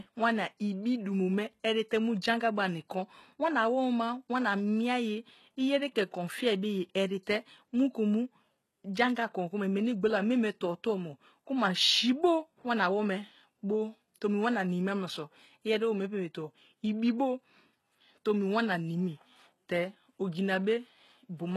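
Throughout the speech, the upper treble sounds synthetic, and nothing reaches above 12.3 kHz. S sounds turn gritty and lispy. The likely cause is HE-AAC compression, at what sounds like about 16 kbps. The codec copied lower bands upward to fake the treble, so harmonics don't align.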